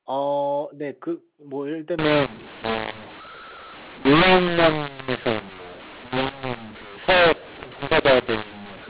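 From 1.99 s to the end, a mu-law and A-law mix-up sets in: A-law samples are decoded as mu-law, scrambling levels. The speech turns harsh, pauses fill with hiss, and the waveform's quiet stretches become a raised noise floor, smeared broadband below 4 kHz on the spectrogram.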